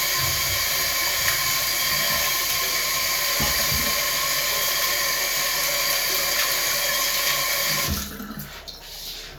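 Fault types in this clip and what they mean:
No faults are audible anywhere in this recording of sounds.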